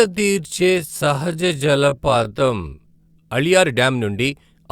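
A time-stretched section runs from 0.0 to 3.3 s, where the speech plays at about 0.53 times its normal pace while its pitch stays where it belongs. The likely cause is software lengthening this stretch to fill a set duration, holding pitch by repeating short slices of the waveform. Those repeated slices give the slowed speech a drawn-out quality, and the pace jumps back to normal abruptly at 3.3 s.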